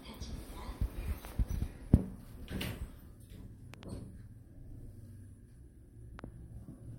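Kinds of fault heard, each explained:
Loud pop: Five sharp pops sit on top of the sound, which carries on underneath. There is a pair at 1.25–1.34 s, another pair at 3.74–3.85 s peaking about 15 dB above the signal, and a single pop at 6.19–6.21 s. The first and last peak about 10 dB above the signal. They are likely voltage pulses from a switch, plug or static discharge. Each shows as a tall spike on the waveform and a thin full-height vertical stripe on the spectrogram.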